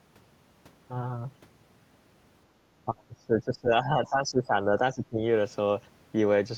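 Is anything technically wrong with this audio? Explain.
Yes. From 2.86 to 5.22 s the speech is suppressed in double talk. Over roughly two seconds of that span the voice dips by up to about 20 dB, most likely because the echo canceller, facing both sides talking at once, turned everything down. Unlike a network dropout, the signal is turned down by the canceller rather than lost in transit.

The other side's voice is also leaking through in two brief scraps, from 2.98 to 3.03 s, very faint at around 40 dB below the speech, and from 4.06 to 4.10 s, somewhat stronger at around 30 dB below. These are likely loudspeaker echo left over by the canceller. They differ from background chatter by being short fragments that fall inside the suppressed stretch.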